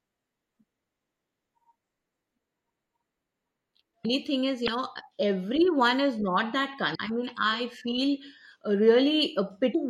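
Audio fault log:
Throughout: MP3 compression. The speech has a watery, swirly edge with plainly audible smearing on consonant attacks. Weak frequency detail flickers in and out between frames, which points to a low bitrate around 64 kbps, likely from a lossy MP3 encode.
4.01–4.05 s, 4.64–4.68 s, 6.91–6.96 s, 9.71–9.76 s: damaged data in a compressed stream. There are four short glitches, each about 40 to 50 ms long, the first just before "thing is" and the second just before "everyone is not that". Corrupted bytes make the decoder misread frames and hunt for the next header, so you hear a brief glitch.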